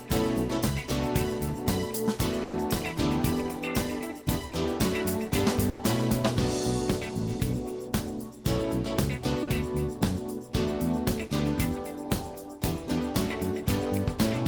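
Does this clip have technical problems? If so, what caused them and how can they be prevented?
Yes, there are two kinds of network dropout.

The first is a burst of packet loss, at 2.43 to 2.55 s and again at 5.69 to 5.81 s. Each time roughly 100 ms of audio failed to arrive, and the receiver papered over it by stretching the last bit of sound and fading it down. You hear a held buzz or hiss sliding away, then the sound picks up further along with that chunk gone. Running forward error correction and a bit more jitter-buffer headroom on a steadier connection would stop this.

The second is short concealed packet loss, at 4.49 to 4.53 s (about 20 ms) and 9.43 to 9.49 s (about 40 ms). Here the hole was small enough that the decoder could extrapolate from the preceding sound and blend back in quickly. The result is a brief smear or wobble rather than an obvious gap, though anything very short falling in that window may simply vanish. 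Enabling in-band FEC and giving the audio stream network priority would keep these from happening.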